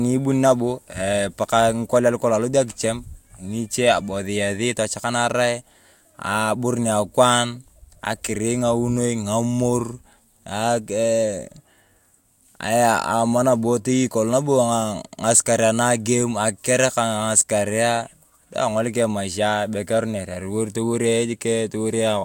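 No technical faults can be heard anywhere in the speech recording; the signal holds steady throughout without any audible disruption.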